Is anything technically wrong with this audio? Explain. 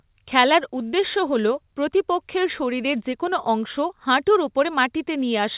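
No, nothing in this speech stood out as a technical problem on listening.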